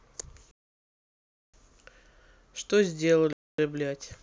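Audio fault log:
0.51–1.54 s, block of digital silence: the speech drops to silence for 1.02 s and returns abruptly, with hard edges because the waveform is cut with no fade. This points to an output buffer left unfilled.
3.33–3.58 s, block of digital silence: a 256 ms hole with the same hard edges, a quarter the length of the first. Unlike a fade-out or concealed packet loss, nothing is smoothed or filled in.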